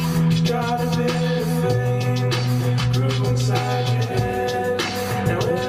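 No technical faults are audible anywhere in the clip.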